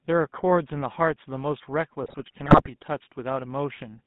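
From the start, the speech carries GSM full-rate codec coloring. Regular-pulse excitation gives a buzzy, gravelly roughness, and the band spans 150 Hz to 3.6 kHz. That sound fits a 13 kbit/s GSM link.

From 2.03 to 2.76 s come GSM bit errors. Corrupted filter, pitch and gain values distort frames, so the speech squawks, pops and gargles.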